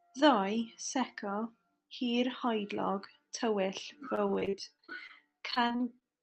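From 4.15 s to 6.03 s the speech turns choppy, with small pieces dropping out roughly every tenth of a second. This is repeated packet loss: around twenty short gaps, the longest about 37 ms, each patched by stretching the last received sound, so about a fifth of that stretch is synthesised filler. The audio, carried over a call path whose Opus coding limits the top end to about 8 kHz, recovers just before the clip ends.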